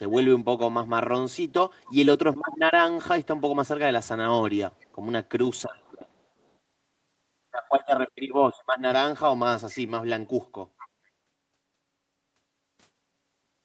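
An echo canceller at a loudspeaker end likely passed part of its microphone pickup back, so an echo leak adds brief, faint copies of the speech trailing 459 ms behind at 1.84, 2.41, 4.79, 5.80 and 10.78 s. These copies sit roughly 20 to 35 dB below the speech.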